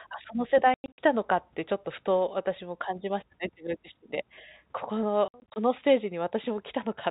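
Between 0.74 and 0.98 s, and again from 5.28 to 5.56 s, the speech breaks into packet loss filled with silence: 180 ms, then 140 ms, vanish in scattered holes up to 100 ms long, with steps that fit 20 ms packets. Unlike concealment, nothing is patched over; the holes are dead silence with hard edges.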